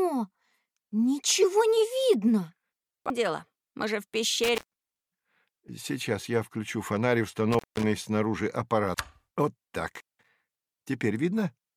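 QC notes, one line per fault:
1.42–1.44 s, corrupt frame decoded: there's a short chirpy blip here, about 20 ms, that doesn't belong to the surrounding sound. That's a compressed frame with flipped bits that the decoder played anyway. The misread gains and codes put energy in the wrong part of the spectrum for one frame's worth of time. The length points to a single damaged frame, which is why it's a blip and not a longer smear.
3.10 s and 8.94 s, CD skip: each one is a tiny tick with a near-instant dropout, just a couple of milliseconds, and then the audio carries on from a different spot. The laser got knocked or hit a flaw and jumped to another turn of the disc's spiral. The player mutes briefly while it relocks, so you hear the tick and then a sudden shift in where the sound picks up, not a smooth continuation.
4.44–5.08 s, 7.52–7.83 s and 9.88–10.29 s, intermittent contact: in each of these the sound cuts out, with crackle at the edges as the connection breaks and remakes. 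The line stays open for about 352 ms, 181 ms and 188 ms. A loose cable or plug is losing contact for a moment, so the signal drops away and leaves just faint hiss until the contact settles back. The crackle around each gap is the contact scraping on and off.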